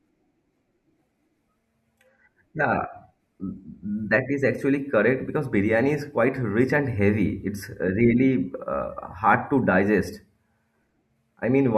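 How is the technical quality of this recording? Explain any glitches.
Nothing to report: no technical faults are audible anywhere in the speech recording.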